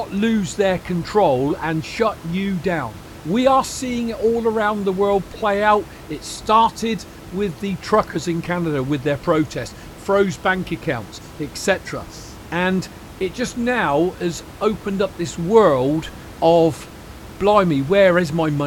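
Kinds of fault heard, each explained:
Nothing here points to a technical fault; the recording carries on without any glitches, dropouts or distortion that you'd need to worry about.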